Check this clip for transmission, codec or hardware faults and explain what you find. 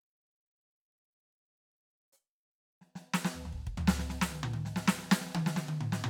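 Nothing in this music clip points to a transmission, codec or hardware problem. There is nothing to report.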